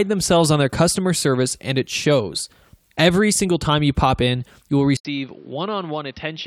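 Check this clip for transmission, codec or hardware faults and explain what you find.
There's one fault, near the end. At 4.97 s the sound drops out for about 80 ms, then comes back duller and boxier, with nothing above 5.9 kHz, new faint background noise well under the speech, and roughly 10 dB less level, all the way to the end. That's likely the input switched to a poorer device, a second mic or headset whose narrower band, lower gain and own noise floor take over from the original.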